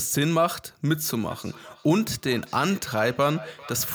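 Speech, with a feedback echo between two devices from 1.05 s to the end of the clip. The sound returns at a fixed interval of roughly 0.4 s. The loudest repeat sits about 18 dB below the speech. Two devices in the same room are on one call. One plays out what the other's microphone captured, and that microphone picks it up again. Each echo canceller only removes its own device's playback, so the loop goes unchecked.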